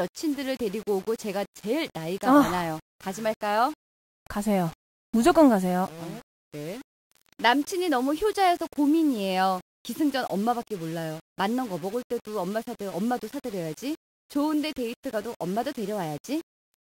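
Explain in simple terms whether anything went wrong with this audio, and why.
Nothing went wrong here: the speech signal's technical state shows no problem anywhere in the recording.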